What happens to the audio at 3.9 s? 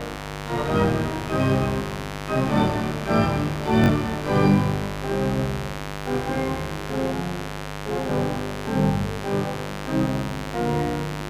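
A Bluetooth stutter hits from 3.84 to 3.90 s. About 43 ms of audio went missing, which fits two lost packets. The receiver replays its last short slice until data returns. It sounds like a brief mechanical flutter, then the sound resumes slightly further on.

Under it runs the mains buzz heard across the whole clip. Sharp switching spikes twice per 50 Hz cycle add a raspy stack of harmonics reaching into the kHz range. It sits only about 10 dB below the sound, so it is plainly audible here too.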